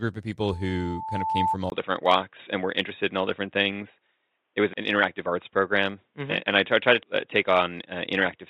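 From 0.47 s to 1.57 s there is loudspeaker feedback squeal: the microphone is catching its own loudspeaker, and at 880 Hz the loop gain runs above one. The tone builds over roughly a second into a piercing squeal that ends up around 5 dB louder than the speech. A spectrogram shows a single thin horizontal line at 880 Hz that brightens steadily, and the waveform envelope swells into a dense, regular oscillation before it cuts off.

At 1.7 s the audio drops out for about 20 ms, and what follows sounds narrow and boxy all the way to the end. That points to an input switched to a poorer device, likely a fallback microphone or a headset's call mode. Nothing above 3.8 kHz survives, the level steps by about 5 dB, and a new noise floor sits roughly 55 dB down. On a spectrogram this appears as a hard ceiling at 3.8 kHz, and the waveform shows a brief flat gap followed by a change in amplitude.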